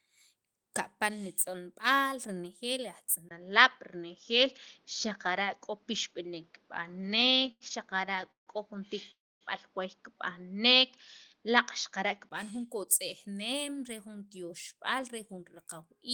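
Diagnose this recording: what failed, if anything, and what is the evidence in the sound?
Input switched to a poorer device, at the capture stage, is the likely cause of the change at 3.29 s. After a 20 ms silence the speech loses its upper frequencies, changes in level by about 5 dB, and gains a faint new noise floor well below the speech. The narrower band and different tone fit a second microphone or a headset call profile taking over. The fuller sound returns at 12.31 s.

Repeated stalls (stutter), a network and jitter-buffer fault, run from 6.91 to 8.50 s. Packets kept arriving late, so the buffer emptied about twenty times, and each time the receiver stretched the last sound to cover the wait. The longest gap was 155 ms, and in total 432 ms was filled, about 27% of that stretch. Nothing is lost, but the speech drags and stutters.

A call audio freeze at 9.11 to 9.44 s was likely caused by packets held up in the network, which left the jitter buffer empty. 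The receiver continued the last sound briefly, then went silent for about 260 ms. In total 296 ms of concealment was inserted, and the speech resumed exactly where it stopped. Nothing is missing, but the call delay grew by that same 296 ms.

A jitter buffer speed-up follows as the receiver sheds the delay it accumulated. From 12.43 to 12.76 s it plays at 109% speed, cutting out about 40 ms, and from 13.27 to 16.02 s at 106%, cutting roughly 200 ms. It does this by removing short pitch-period slices many times in a row. The pitch stays the same while the speech sounds hurried.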